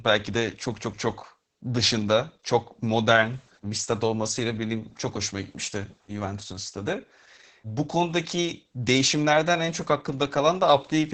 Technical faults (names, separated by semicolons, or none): Opus voice compression